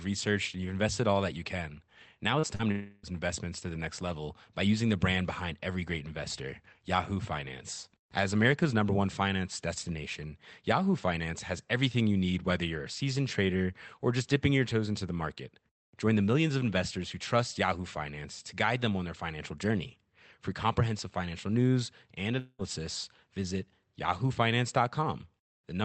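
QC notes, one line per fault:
2.39 to 2.46 s and 2.55 to 2.62 s, short concealed packet loss: about 40 ms of packets arrived too late each time, so the decoder continued the preceding sound for roughly 36 and 41 ms before blending back, heard as two quick smears just before the longer break.
2.71 to 3.06 s, long network dropout: a gap of about 0.32 s, likely a network outage, is bridged entirely by a fading continuation of the last sound with no true silence, and the audio resumes at "investments to the next" with that stretch missing.
22.39 to 22.62 s, long network dropout: right after "comprehensive financial news and", about 0.2 s is replaced by a decaying buzz or hiss extending the prior sound, then real audio returns with the lost portion gone. The band limit near 8 kHz fits the Opus call path.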